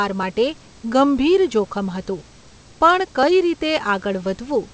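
The speech comes through a call path whose codec leaves nothing above 8 kHz, consistent with G.722 at 64 kbps, with room noise sitting about 34 dB below the voice and no technical faults to be heard.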